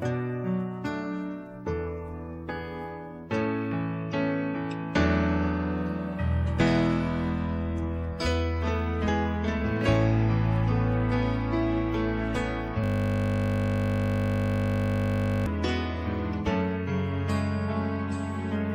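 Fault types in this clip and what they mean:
System hang loop: The system froze while the sound hardware kept replaying one 20 ms stretch of audio. From 12.84 to 15.46 s it repeats 131 times. At 50 repeats per second, this becomes a steady 50 Hz buzz.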